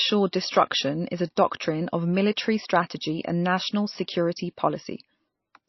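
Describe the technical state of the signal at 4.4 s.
At 4.4 s the speech sounds watery and swirly, dull with nothing above about 5.8 kHz, as it does throughout. This is likely MP3 compression: a starved encoder, consistent with a bitrate near 26 kbps, cuts the treble and switches weak frequency lines on and off.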